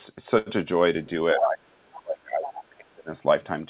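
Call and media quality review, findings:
Short stall from a late packet, 0.38 to 0.49 s: sound held and stretched for 83 ms, faint buzz or dip, nothing lost. Jitter buffer ran dry waiting for a late packet, filled by extending the previous sound, then resumed. Playout delay is 83 ms longer afterwards.

Speech suppressed in double talk, 1.33 to 3.10 s: the talker's speech dips and thins in patches totalling around one and a half seconds, the deepest about 35 dB down. Likely the echo canceller attenuating near-end speech while the far end was also talking.

Other side's voice leaking through, 1.93 to 2.00 s at about 20 dB below the talker and 2.56 to 2.68 s at about 15 dB below: short scraps of a second voice. Likely residual loudspeaker echo not cancelled from the microphone. The audio is band-limited to 4 kHz throughout, which is expected for a narrowband G.711 call.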